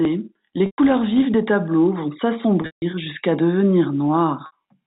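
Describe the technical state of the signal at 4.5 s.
Packet loss with pitch repetition runs from 4.46 to 4.52 s, a gap of about 60 ms that fits three 20 ms packets. The receiver loops the last pitch period, giving a brief buzzy hold. The hold fades toward silence before the speech cross-fades back in.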